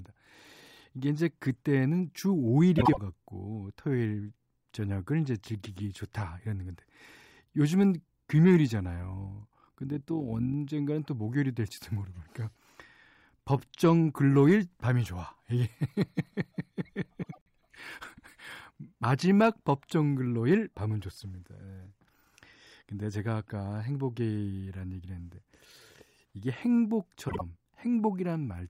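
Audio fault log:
2.78–2.98 s, 17.23–17.48 s and 27.28–27.41 s, frames out of order: each time two adjacent blocks of about 72, 96 and 48 ms play in swapped order. The speech jumps forward then back in a garbled flutter. No time is lost.
9.02–10.56 s, overlap-add ripple: the frames were rejoined with windows whose overlap doesn't sum to a steady gain, so the level swings by about 6 dB once per frame, around 50 times a second. This is heard as a rough, robotic tremolo.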